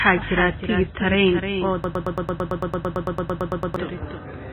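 Doubled audio track, throughout: a second copy of the speech trails about 300 ms behind at roughly 10 dB lower, dry and full-band, likely from a slower capture path or misaligned edit.

MP3 compression, throughout: heavy codec damage with nothing above 4 kHz, giving a watery, swirling sound and smeared attacks that point to a very low bitrate around 16 kbps, likely from encoding.

Broken-record loop, 1.84 to 3.76 s: a 112 ms fragment repeats back to back 17 times, likely because the player or stream stalled, and the audio due in that span is lost.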